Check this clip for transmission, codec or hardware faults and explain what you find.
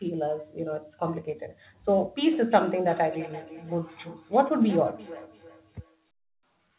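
One transmission fault is present: a feedback echo between two devices, from 2.32 s to 6.08 s. The speech comes back at a steady spacing of roughly a third of a second, peaking at about 16 dB below the speech. A second device on the same call replays this microphone's audio into the room, and that sound is picked up again, which the first device's echo canceller cannot remove. The repeats recur at a fixed interval and grow thinner and more ringing each time. Room reverberation would blur into a smooth tail instead. The audio has nothing above 4 kHz, which points to a narrowband G.711-style call codec.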